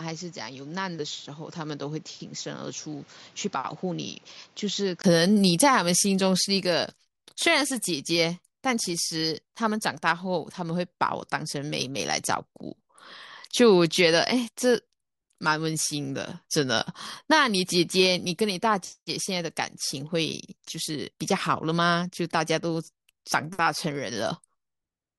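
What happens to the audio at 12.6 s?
Nothing goes wrong at 12.6 s; the speech runs on intact through that moment.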